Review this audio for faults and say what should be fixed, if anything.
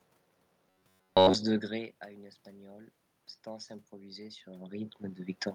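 From 0.67 to 1.37 s the speech turns into a rigid, metallic buzz at 93.8 Hz. This is robotic sound from repeated short buffers. The likely cause is late audio. Blocks of about 11 ms get replayed, and most of the real sound is skipped. Steadier delivery or a deeper jitter buffer would prevent it.

From 1.67 to 5.46 s the automatic gain is rising. The input dropped about 20 dB after the talker moved back near 1.5 s. The gain climbs about 5 dB over several seconds. Voice and room noise swell together. A lower gain ceiling and a steady microphone distance would prevent it.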